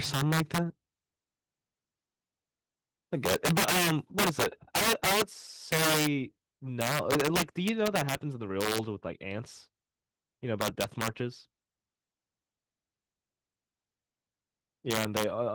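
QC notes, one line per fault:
0.05–0.58 s, 3.26–5.22 s, 5.72–6.07 s, 6.81–8.15 s, 8.61–8.78 s, 10.61–11.08 s, 14.91–15.24 s: integer overflow. Loud speech peaks, driven about 1 to 8 dB past the integer limit, wrapped to the opposite sign instead of being held there. Each wrap throws the waveform across the full range, producing violent cracks far harsher than clipping, worst in the 3.26–8.15 s stretch.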